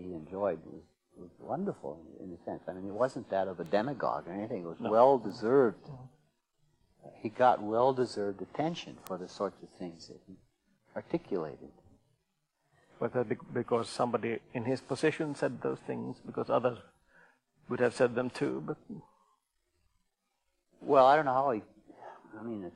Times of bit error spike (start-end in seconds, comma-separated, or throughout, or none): 3.66, 5.30, 9.07